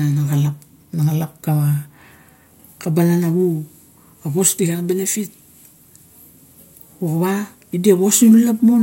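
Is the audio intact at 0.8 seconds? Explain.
Yes, the speech at 0.8 seconds is intact, with no dropout, click, distortion or other fault audible at that moment.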